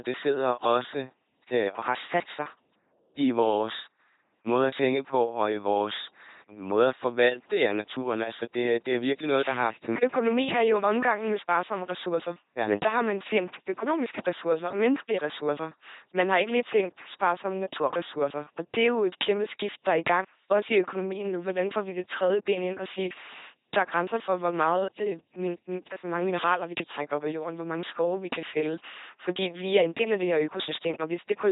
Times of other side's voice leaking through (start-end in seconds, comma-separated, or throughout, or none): none